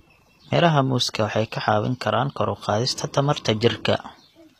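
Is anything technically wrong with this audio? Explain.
Yes. Throughout, the treble sounds synthetic, with gritty, lispy s sounds and nothing above 14.9 kHz, likely HE-AAC compression at a low bitrate, around 24 kbps, rebuilding highs from copied lower bands.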